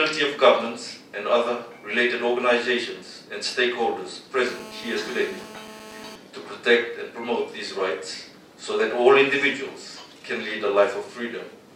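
From 4.46 to 6.16 s a GSM phone buzz cuts in: a hard, raspy tone at about 217 Hz, rich in harmonics and unrelated to the programme, sitting about 18 dB below the signal. A nearby 2G handset on a call is bursting, and the audio circuitry rectifies those radio pulses, holding the buzz steady.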